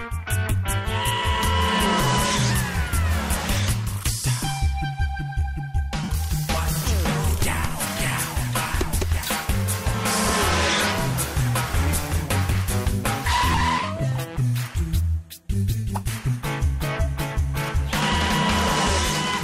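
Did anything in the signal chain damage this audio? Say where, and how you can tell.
Yes, at the Bluetooth link, from lost LE Audio frames. Three gaps are audible. From 6.03 to 6.09 s a 52.5 ms stretch turns to a noisy smear, which fits seven consecutive 7.5 ms frames. A shorter 15 ms blur sits at 10.28 to 10.30 s. From 13.52 to 13.61 s, 45 ms of losses are scattered over 90 ms, the longest run around 20 ms. The LC3 decoder repeats the last spectrum with random signs, smearing tones into noise.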